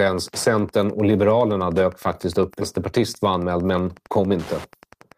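A speech recording carries Wi-Fi interference from start to finish: a steady tick repeating every 102.4 ms, just under ten times a second, sitting roughly 25 dB below the speech. A nearby Wi-Fi radio's beacon bursts are being rectified by the audio circuitry. On a spectrogram this shows as evenly spaced thin vertical lines spanning the full frequency range, and in the waveform as a regular comb of tiny spikes visible in the pauses between phrases. At 2.61 to 2.63 s there is a skip ahead. Roughly 0.7 s of speech is simply gone, and playback jumps forward with no gap and nothing filled in, so the delay drops by about the same amount. This points to a stretch being discarded, in transit or by an overflowing jitter buffer, while later audio was already queued. The waveform shows an abrupt join where the envelope changes without any silence, and the spectrogram shows harmonics that break off and restart abruptly. 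From 2.77 s to the end, a jitter buffer speed-up plays the speech at about 108% of normal rate with pitch unchanged, so it sounds slightly hurried. To work off the excess buffered delay, the receiver removes short pitch-period-sized pieces many times in succession, about a fifth of a second in total. On the waveform the syllables look compressed in time while the individual glottal cycles keep their spacing. On the spectrogram the harmonic spacing stays the same while syllables and gaps shorten.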